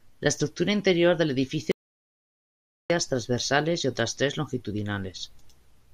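At 1.72 s the input feeding the recorder was likely cut off, whether by a disconnected device, a broken link or a stray mute, while the recording carried on writing silence. The result is an audio dropout to silence: the speech stops abruptly mid-flow, and until 2.90 s there is dead silence with no room tone at all. Roughly 1.18 s of speech is simply missing before the sound snaps back in.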